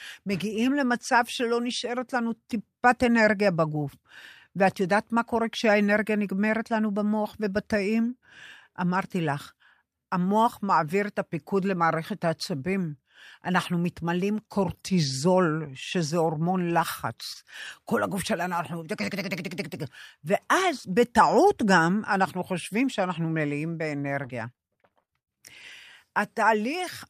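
Packets of this speech recording were lost in transit at three points. Six single packets vanished at 17.11, 17.19, 17.35, 17.52, 17.60 and 17.68 s, and each was replaced by the low-bitrate copy carried in the following packet. This is a lost packet rebuilt from error correction, so no gap opens, but each 20 ms stretch turns briefly rougher and noisier. Between 17.33 and 17.37 s, 20 ms of audio arrived too late even for that. The receiver papered over it with a continuation of the preceding sound, a short concealed packet loss heard as a quick smear or wobble. From 24.22 to 25.71 s the stream kept dropping packets in repeated packet loss. Twelve gaps add up to 300 ms missing, the longest being 77 ms. Concealment covers about a fifth of that span, and roughly a tenth of a second is rebuilt from error correction, so the sound turns choppy, with pieces missing.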